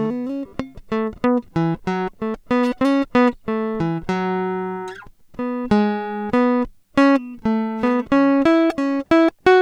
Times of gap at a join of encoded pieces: none

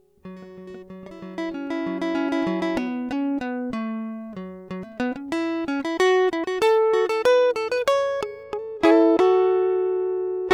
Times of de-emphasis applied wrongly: 8.43-10.53

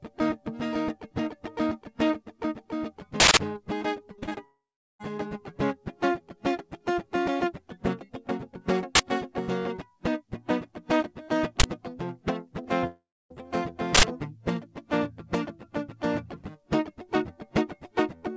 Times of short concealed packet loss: 12.63-12.85

